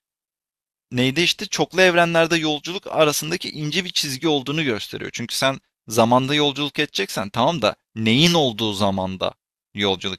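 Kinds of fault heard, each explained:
No audible faults detected.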